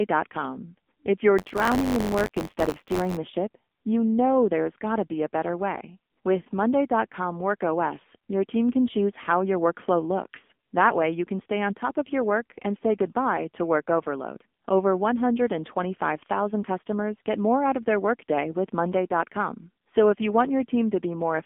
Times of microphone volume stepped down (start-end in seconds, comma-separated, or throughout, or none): none